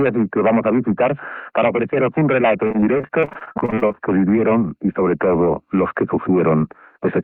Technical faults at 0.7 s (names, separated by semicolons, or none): none